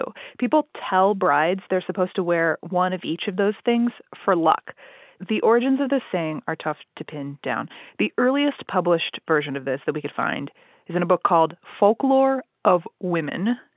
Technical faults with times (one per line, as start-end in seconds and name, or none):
none